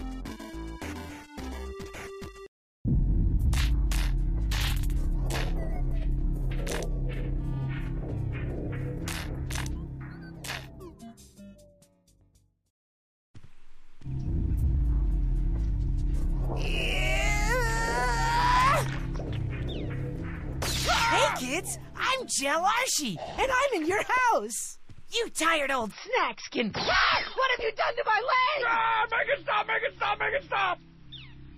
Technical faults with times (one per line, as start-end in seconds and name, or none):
25.91-31.58 adaptive stream at a lower bitrate